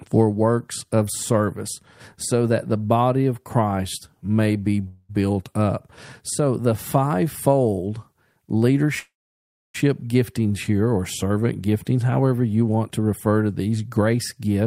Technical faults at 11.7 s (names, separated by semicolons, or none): none